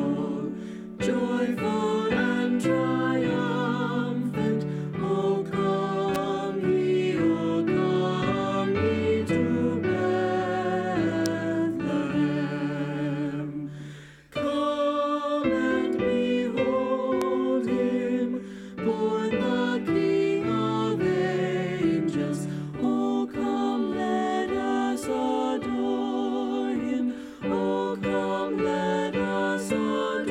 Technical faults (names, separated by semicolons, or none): electrical switching spike